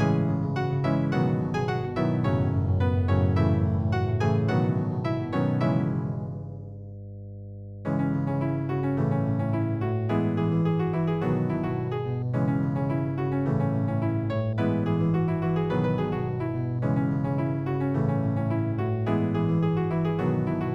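From start to finish there's mains hum: a steady 50 Hz tone sitting roughly 15 dB below the sound. Something like a ground loop or a nearby transformer is letting the power line bleed into the signal, so it's a constant low drone under everything.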